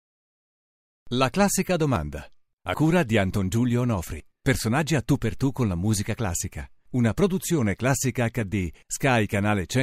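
The capture program likely failed to read its buffer before the hardware overwrote it, so at 4.2 s a dropped buffer (overrun) removes about 70 ms of speech. The two sides butt together without silence, producing an abrupt forward jump.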